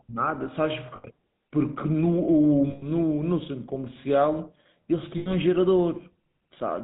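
The GSM full-rate codec, present throughout, models the vocal tract with sparse pulse excitation and cuts everything above 4 kHz, giving the speech a plainly audible buzzy roughness. Lost GSM frames occur at 0.96 to 1.06 s, 2.70 to 2.87 s and 5.18 to 5.35 s, gaps of about 80, 120 and 80 ms. In each, the last good frame is repeated, producing a brief, rough metallic ring.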